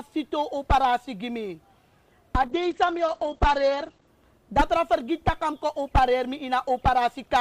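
From 2.43 s to 4.14 s the audio turns rough and muffled, losing its top end as the upper frequencies vanish above 8 kHz, then regains its full brightness. This is a call bitrate drop: the connection's bandwidth estimate fell and the encoder was pushed to a far lower rate, which fits a cut from about 48 kbps to about 12 kbps, held at its lowest for 1.65 s. Coding that coarsely, Opus narrows the audio band from 20 kHz to 8 kHz until the rate recovers.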